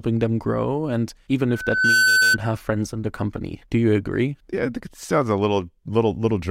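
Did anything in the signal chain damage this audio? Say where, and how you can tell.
Yes. A loudspeaker feedback squeal runs from 1.49 to 2.38 s at the playback stage. A steady 1.5 kHz tone swells over about half a second to sit a little above the speech, as the microphone re-amplifies its own loudspeaker output at that frequency.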